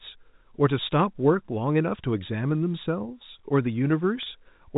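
At 4.23 to 4.26 s there is packet loss with pitch repetition. A 30 ms gap, which fits a single lost packet, is bridged by repeating the last pitch period, so the speech briefly holds on a slightly buzzy, sustained tone before resuming over the band-limited G.711 telephone channel.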